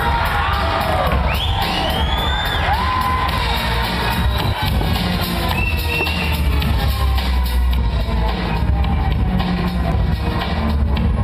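At 1.37 s there is a corrupt FLAC frame. Flipped bits derail the decoder's prediction, causing an error peaking near -10 dBFS. Another hits 4.53 to 4.62 s, peaking about -8 dBFS, then clears.

From 7.77 s onward, de-emphasis was applied wrongly. An unneeded treble cut drops 10 kHz about 13 dB below 1 kHz. The sound turns dull and muffled.

Between 9.82 and 10.01 s, compressed frames were skipped. Roughly a tenth of a second goes missing. The audio jumps ahead at the join.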